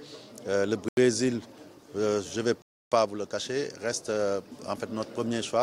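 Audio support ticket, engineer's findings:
Dropouts to full silence at 0.88–0.97 s (87 ms) and 2.62–2.92 s (297 ms). Sound then resumes. Likely a Bluetooth stall: interference delayed packets, the headphone buffer emptied, and playback paused until retransmitted packets arrived.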